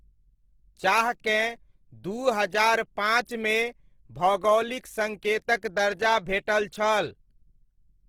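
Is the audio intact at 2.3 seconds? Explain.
No. At 2.3 seconds the speech carries Opus compression damage that runs through the whole clip: grainy, rough and noisy. That likely comes from the music-mode encoder refilling starved bands with folded or noise content, which fits a low bitrate near 16 kbps.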